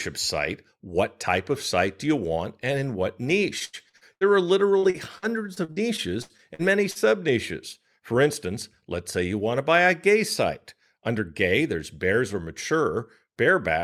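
Speech with repeated packet loss (robotic sound) after "want and in what" at 3.59–4.24 s (five gaps, longest 86 ms) and 4.78–6.98 s; the waveform shows choppy holes and repeated-segment patches with smeared, banded harmonics on a spectrogram.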